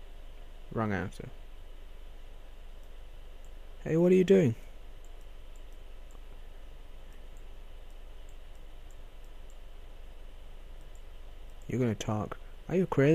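No technical faults can be heard anywhere in the audio.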